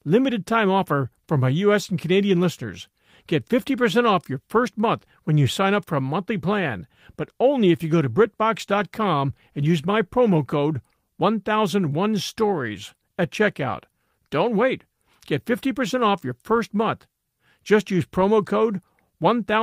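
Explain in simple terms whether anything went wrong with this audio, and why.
Nothing went wrong with this recording; there are no faults to point to anywhere in it. The speech comes through as it was captured, with no glitches or interruptions at any moment.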